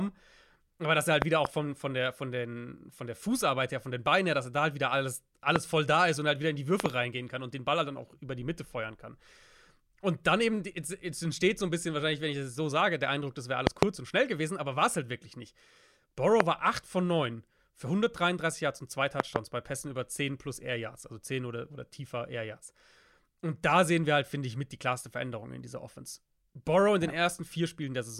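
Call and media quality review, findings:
Loud pop, six events: 1.22–1.47 s (double), 5.56–5.58 s (single), 6.80–6.88 s (double), 13.67–13.85 s (double), 16.40–16.42 s (single), 19.20–19.38 s (double). Sharp thumps, roughly 20–25 dB above the speech, which continues underneath. Likely a connector, switch or static discharge injecting voltage steps. Waveform shows tall isolated spikes. Spectrogram shows thin full-band vertical stripes.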